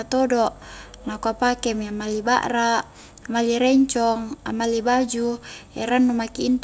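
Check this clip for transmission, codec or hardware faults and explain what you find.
Nothing faulty can be heard anywhere in this speech.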